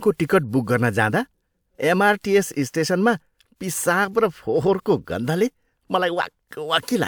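No technical faults can be heard anywhere in the recording; the signal stays steady and intact throughout.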